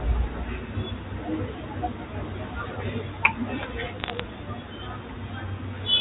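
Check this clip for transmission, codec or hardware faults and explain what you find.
One transmission fault is audible, on a G.711 telephone path. From 4.0 to 4.2 s there are bit errors on the digital phone line. Roughly three bits in a thousand arrive flipped. Each flip corrupts a single sample. Hits on the sign or upper bits make sharp ticks. Together they sound like a short burst of crackle over the speech.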